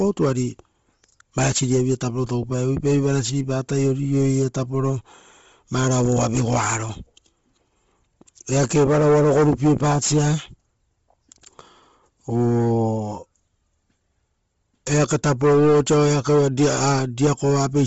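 The speech was likely passed through Bluetooth LC3 compression at a low bitrate, around 24 kbps, with short 7.5 ms frames. Nothing survives above 7.7 kHz, and the upper band is heavily noise-filled, so the voice sounds breathy, grainy and dull throughout.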